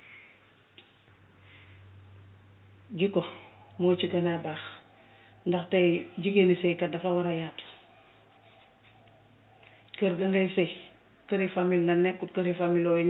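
The speech signal carries no technical faults, with only the room's own background noise sitting about 52 dB beneath it as part of the recording.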